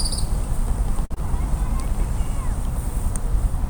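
At 1.05 s a packet arrived late and the jitter buffer ran dry, causing a short stall from a late packet that lasts until 1.12 s. The receiver held the most recent sound for about 49 ms while it waited, then picked up again from exactly where it had stopped, so nothing is lost, but playback now sits 49 ms later. What you hear is that sound drawn out unnaturally, with a faint buzz or a slight sag in level.

Immediately after, between 1.14 and 1.28 s, a short concealed packet loss occurs: 20 ms of audio never reached the decoder in time. The receiver covered the gap by extending the preceding sound for 19 ms, carrying its pitch forward if it was voiced or synthesising matching noise if it wasn't, then crossfaded back to the real signal, adding around 10 ms along the way. The result is a brief smear or wobble, and a very short sound can drop out entirely.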